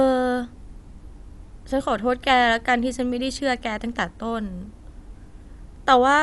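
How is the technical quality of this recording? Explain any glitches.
The speech sounds dull and band-limited from start to finish, with nothing above about 11.5 kHz, and a rough, fluttering noise clings to voiced sounds. The likely cause is Dolby Digital compression at a low rate, fitting a 64 kbps stream: the encoder cut the top band and left many frequency lines without mantissa bits, so the decoder filled them with noise.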